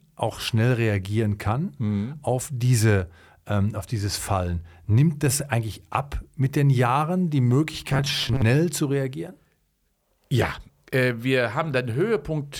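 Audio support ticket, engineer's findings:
Robotic sound from repeated short buffers, 7.90–8.42 s, before "zu reagieren": rigid 133 Hz buzz, likely starved buffer looping ~7.5 ms chunks; spectrogram shows flat harmonic comb.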